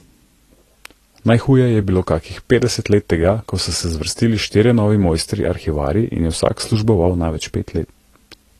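Across the whole recording the speech sounds dull and smeared, with a fizzy, warbling edge on sibilants and nothing above about 14 kHz. This is likely AAC compression, with the AAC-LC encoder starving bands of bits at a rate that fits roughly 32 kbps.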